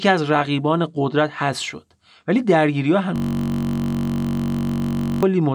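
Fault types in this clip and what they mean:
System hang loop: from 3.16 s to 5.23 s the speech freezes into one 21.33 ms fragment played back about 97 times. The playback system stalled while the audio hardware kept reading the same small ring buffer, which fits a 1024-sample buffer. With a loop that short, the repeats fuse into a steady buzz at 46.9 Hz rather than a stutter, and about two seconds of the real speech never arrive.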